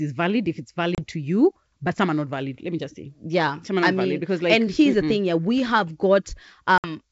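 Speech over a wideband G.722 call shows packet loss on an ADPCM call at 0.95 s (30 ms lost) and 6.78 to 6.89 s (60 ms lost). Each is a hard-edged blank column on a spectrogram, then slightly distorted speech while the decoder's predictor and step size resynchronise.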